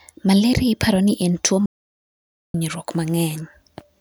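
An audio dropout to silence runs from 1.66 s to 2.54 s, cutting the speech off mid-flow for about 0.88 s before it resumes just as abruptly. The gap is dead silence, with no room tone or background underneath, and whatever was spoken during it is simply missing. The likely cause is a momentary loss of the input signal, such as a disconnected device, a failed link or a brief mute, while the recorder kept writing silence.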